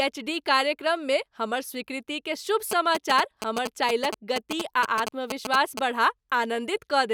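From 2.71 to 5.79 s, a nearby 2G phone signalling the network sends short groups of radio bursts that the audio circuit rectifies. These GSM signalling bursts break into the speech as a galloping dit-dit-dit of brief 217 Hz buzzes, only slightly quieter than the speech.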